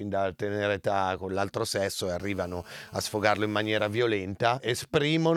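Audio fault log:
2.20–3.99 s, GSM phone buzz: a 2G phone close by was on a call, transmitting in bursts about 217 times a second, and the audio circuitry rectified those radio pulses into the signal path. The result is a hard, raspy buzz at 217 Hz, thick with harmonics, sitting about 27 dB below the speech and unrelated to it. Because the phone was in a call, the buzz holds nearly steady across the span rather than coming and going.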